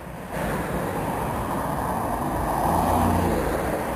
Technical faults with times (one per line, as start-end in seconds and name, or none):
0.00-3.95 imaging from sample-and-hold upsampling